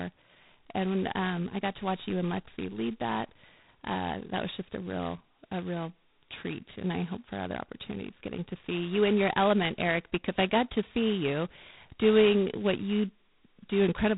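From start to finish the speech carries heavy G.726 ADPCM damage: a harsh, rasping hiss that rises and falls with the speech level, consistent with the 16 kbit/s mode, where too few bits code each sample's prediction error. Nothing passes above 3.9 kHz.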